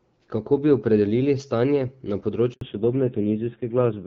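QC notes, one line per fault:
2.53–2.61 s, handover gap: right after "bi opredelili stanje na" the speech dies within milliseconds into 80 ms of silence. This is a clean hole with no smearing, unlike packet-loss concealment, which fills the gap with buzzy repeats.
2.61 s to end, fallback to narrowband: everything above 4 kHz vanishes as the call leaves HD Voice. The speech turns duller and rougher, which fits a low-rate narrowband mode. Unlike a gradual filter, this is a hard, permanent step at the gap.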